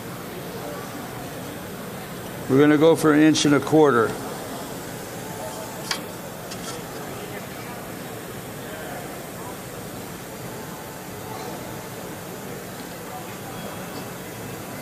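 Dropped samples at 2.87 s produce a single sharp click, seen as a thin vertical line running straight up the spectrum. The likely cause is a tiny stretch of samples, a fraction of a millisecond at most, going missing from the stream, so the waveform leaps directly from one value to a later one instead of travelling between them. That gap is far too brief to take any audible sound away. All that remains is the step itself, a brief broadband tick.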